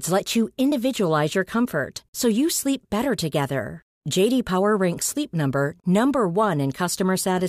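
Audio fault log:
0.72 s and 5.02 s, dropped buffer (overrun): the program likely failed to collect samples before the hardware overwrote them, so roughly 20 ms vanishes, heard as a jump, the first just after "let you".
5.80–5.84 s, gap at a join of encoded pieces: separately encoded pieces, which fits 6-second segments, were joined untrimmed, leaving encoder delay and padding as a 38 ms silence with smeared edges before the sound resumes.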